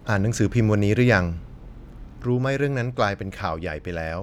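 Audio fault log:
2.25 s to the end, one channel drops out. At 2.25 s the speech falls abruptly in level by about 6 dB and stays down to the end of the clip. The drop is sudden, with no fade. The cause is likely a lost stereo channel. Once one side goes silent, the mono sum carries only half of what both channels shared, so the level halves. Anything present only in the missing channel vanishes too.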